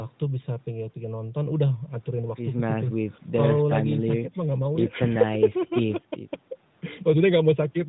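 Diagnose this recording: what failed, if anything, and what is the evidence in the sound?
Nothing failed: there is no fault to diagnose, and the sound gives no evidence of one.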